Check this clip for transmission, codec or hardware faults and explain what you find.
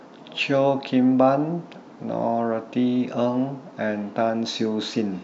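Nothing wrong can be heard anywhere in this speech.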